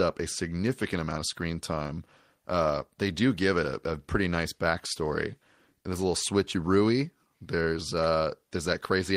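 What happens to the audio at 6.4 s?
Nothing goes wrong at 6.4 s; the speech there plays through cleanly, with no dropout, click or distortion.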